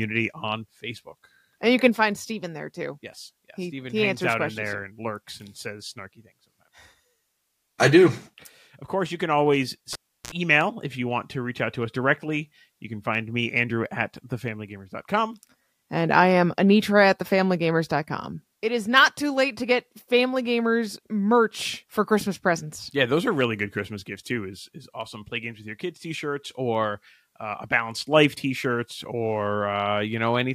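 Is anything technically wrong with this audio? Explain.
Yes. At 9.93 s, right after "course you can always", the speech cuts off with a sharp pop and drops to near silence for about 0.35 s. A short 60 Hz mains buzz, about 60 ms long, follows, then a second pop at 10.33 s as the sound returns before "email if you want". This is a cable pulled and plugged in while live. Unplugging breaks the signal path, and the buzz comes from the plug tip touching before the ground connects.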